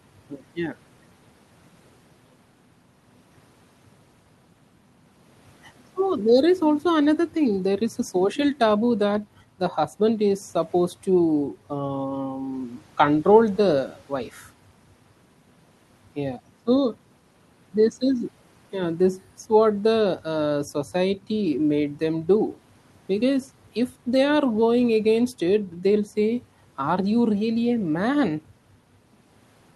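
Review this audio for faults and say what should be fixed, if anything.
Nothing needs fixing: no faults turn up in this speech, and the call path leaves only its usual coding noise and the expected top-end limit near 12 kHz, which fits Opus at around 32 kbps.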